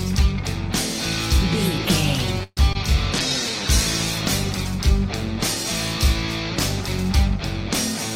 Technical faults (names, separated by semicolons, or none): call audio freeze; short concealed packet loss; call bitrate drop